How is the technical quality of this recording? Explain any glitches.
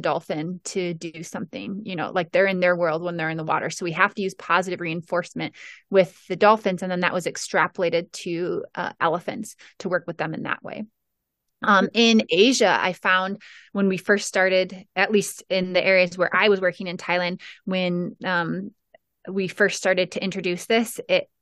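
No glitches can be heard anywhere in this speech recording. There is nothing to explain, because no technical fault turns up at any point in the audio.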